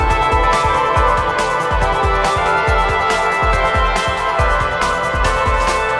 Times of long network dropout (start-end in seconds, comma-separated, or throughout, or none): none